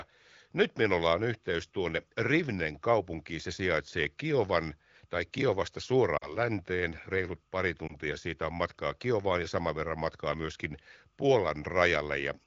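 At 6.18 to 6.38 s, lost AMR speech frames cause a short drop toward near silence. About 40 ms of coded speech never arrived intact, which fits two 20 ms frames, so the decoder repeated its last good pitch and vocal tract settings at falling gain before recovering roughly. A second, briefer loss at 7.87 to 7.96 s, about 20 ms and consistent with one frame, gives a quick dip and rough return, heard against light AMR-WB wideband coding at 15.85 kbit/s.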